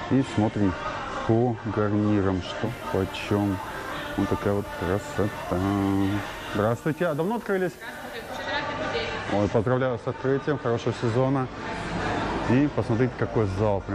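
At 2.6 s the digital radio blends to analogue FM over about 120 ms: hiss rises roughly 30 dB below the signal, level drops about 2 dB, returning at 8.49 s.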